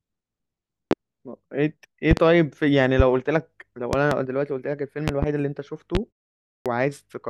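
Sharp loud pops cut through the speech at 0.91 s, 3.00 s and 5.95 s, with quick double pops at 2.11 to 2.20 s, 3.93 to 4.15 s and 5.08 to 5.26 s, each standing well above the speech. These are likely voltage glitches from a switch, plug, static or driver, shaped by the circuitry that follows.

At 6.61 s the next phrase bursts abruptly out of silence with its first 47 ms missing, a clipped start after a pause of 0.57 s. The output device, having gone to sleep during that pause, needed time to wake and swallowed the onset.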